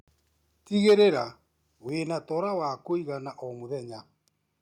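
Microphone overload at 0.87 to 1.02 s: the peaks, about 5 dB over the limit, likely hit the converter ceiling, clipping around 7 percent of samples into a harsh crackle. Microphone volume stepped down at 0.9 s and 1.89 s: the level drops suddenly, by about 2 dB then about 5 dB, likely as software lowered the input volume.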